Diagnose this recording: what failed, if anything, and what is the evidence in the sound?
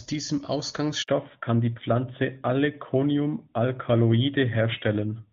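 Handover gap at 1.02 to 1.08 s, a network-stage fault. The speech dies away within a few tens of milliseconds and falls silent for 60 ms until the new link starts. During a handover the phone moves the call onto a different radio link, and for that interval no speech frames reach the decoder. The speech that fell in that window was never delivered, so those sounds are lost and cannot be recovered from the recording.

Fallback to narrowband from 1.08 s to the end, at the codec stage. Before the gap the speech has the airy top end of HD Voice, and the faint-or-absent coding damage fits a high-rate AMR-WB mode. From the gap onward nothing above 4 kHz remains. Sibilants lose their edge and the speech sounds duller and boxier. After the handover the call renegotiated down to the older narrowband codec, which sounds consistent with AMR-NB at around 12.2 kbit/s. That codec cannot carry the upper band at all.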